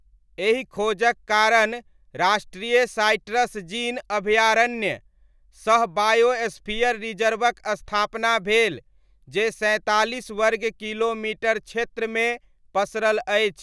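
Nothing in this speech recording stands out as a technical fault; it simply runs along without any glitch worth pointing to.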